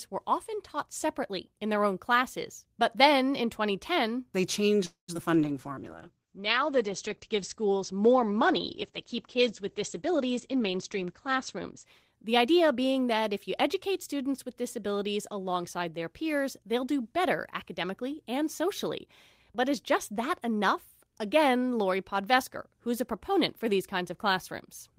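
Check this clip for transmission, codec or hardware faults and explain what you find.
Five kinds of fault are audible in this speech clip. Most of them cluster around a network disruption just after 4.8 s.

Call audio freeze, 4.85 to 5.10 s. The sound stops moving forward for about 229 ms. The last sound is stretched into a fading tail, then about 120 ms of silence. The likely cause is held-up packets draining the jitter buffer. When they arrive, the speech resumes where it stopped. Nothing is lost, but the delay grows by 229 ms.

Short concealed packet loss, at 5.14 to 5.17 s, 5.17 to 5.20 s and 5.26 to 5.28 s. Each event loses 20 ms of audio that never reached the decoder in time. The first two are patched with very brief extrapolated sound, 6 and 8 ms. They are heard as quick smears. The third gets no patch at all. The gap is simply skipped, which cuts roughly 20 ms of delay and leaves a tiny jump.

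Call bitrate drop, 5.35 to 12.76 s, ending just before "that if you educate". The encoder falls from 32 to 10 kbps and stays at the bottom for about 5.8 s. Coding becomes coarse. Audio bandwidth shrinks from 20 kHz to 8 kHz. The speech turns dull, muffled and rough. It loses its crisp sibilants until the rate recovers.

Jitter buffer slow-down, 5.36 to 5.70 s. After the freeze, the receiver rebuilds its reserve. It repeats single pitch periods and bits of pauses. This adds 40 ms in total. Speech plays at about 90% speed with unchanged pitch. Sounds are drawn out.

Jitter buffer speed-up, 10.06 to 12.76 s, finishing just before "that if you educate". Now the buffer holds too much audio. The receiver trims short pitch-period slices, removing roughly 200 ms. Delivery runs at about 108% speed. Pitch stays the same, but the phrasing sounds hurried.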